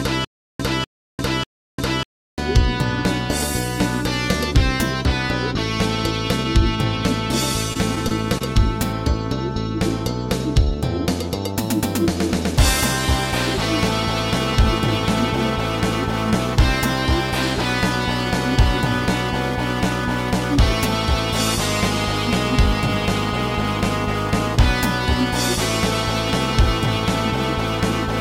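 Stutter with silent gaps, already under way when the clip opens and lasting until 2.38 s: the same 0.25 s fragment plays, then about 0.35 s of dead digital silence follows, and the pair repeats three times at a steady 0.59 s pace. The likely cause is a player or stream that stalled and, on each retry, replayed its last buffered piece before running dry. Whatever should have sounded across those gaps is gone.

Repeated packet loss (robotic sound) from 7.73 s to 8.42 s: within this short stretch the audio drops out four times in quick succession, the longest hole only 22 ms, for 60 ms of missing material in all. Each hole is papered over by stretching the preceding sound forward, about 68 ms of patched audio, roughly a tenth of the span. The result is a brief choppy flutter with small pieces cut away.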